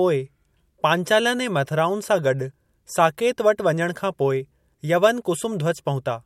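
Nothing stood out on listening to this speech clip.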